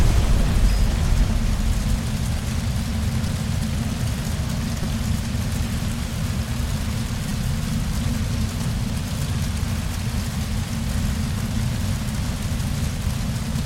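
Short clicks or brief buzzes cut through the sound at 3.27, 4.83, 7.29 and 9.34 s, the one at 7.29 s slightly longer. Each is a repeated buffer: fresh audio failed to arrive in time, so the device replayed its last block of about 5.33 ms, which fits a 256-sample buffer. That block played twice more at 3.27 and 4.83 s, three more times at 7.29 s, and once more at 9.34 s, hard-joined, dropping roughly 5 to 15 ms of audio each time.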